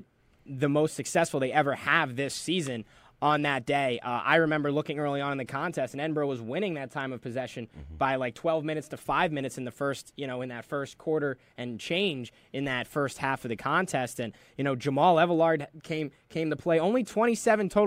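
No technical faults are audible anywhere in the speech recording.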